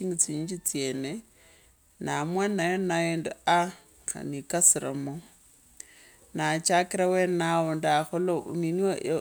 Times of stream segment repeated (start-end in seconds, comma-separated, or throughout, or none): none